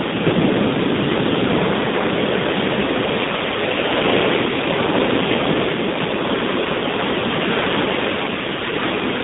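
A speech clip carried through the AMR narrowband mobile codec throughout, at a low bitrate that sounds like about 7.4 kbps, band-limited to roughly 150 Hz to 3.7 kHz, giving muffled, buzzy, synthetic-sounding speech.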